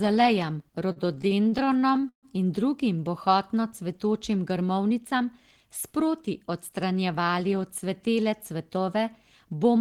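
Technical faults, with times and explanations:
0.79–2.26 s, repeated stalls (stutter): late packets emptied the jitter buffer fifteen times, and each hold stretched the last sound, up to 138 ms, so the audio drags without losing content.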